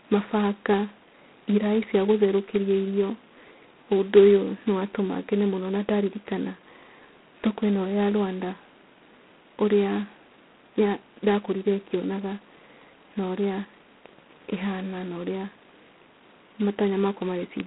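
Throughout, the speech carries heavy G.726 ADPCM damage consistent with 16 kbit/s coding, only two bits per sample. That coarse quantisation leaves a harsh, rasping hiss riding the voice's level. A spectrogram shows energy confined to roughly 200 Hz–3.4 kHz, blank above 3.9 kHz.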